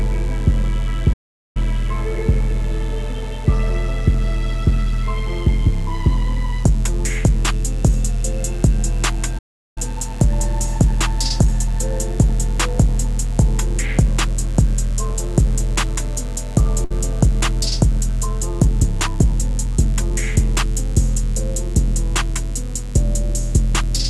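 A steady, raspy mains buzz sits under the whole thing, built on 50 Hz harmonics that reach well up into the kilohertz range and roughly 35 dB below the signal. That's the spiky kind you get when a dimmer, rectifier or unshielded lead lets switching pulses in twice per mains cycle. There are two playback stalls, where the sound just cuts out mid-flow and then resumes: 1.13 to 1.57 s (about 0.42 s) and 9.38 to 9.78 s (about 0.38 s), most likely the player starving for data or its thread getting blocked. At 16.85 s there's a short stall from a late packet, where the last bit of sound gets held for 59 ms while the jitter buffer waits, then carries on from the same spot with nothing lost, just a slight smeared hold. The call path itself tops out around 12 kHz, which fits an Opus link at about 40 kbps.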